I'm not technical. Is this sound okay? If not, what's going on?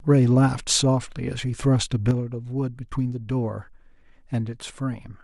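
No. At about 2.11 seconds the speech suddenly gets noticeably quieter and stays that way to the end. This is likely one channel drops out: one side of the stereo signal is lost, so the combined sound keeps only half its strength.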